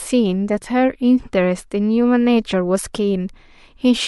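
At 2.93 s there is pre-echo. A short hiss appears about 10 ms before a sharp attack in the speech. The codec spread quantisation noise across a whole transform block, and the attack sat late in it. Noise sized for the loud attack leaked into the quiet gap ahead, rising about 14 dB. The smear fits a block of about 26 ms, with no switch to shorter blocks. The attack sounds blunted and smeared.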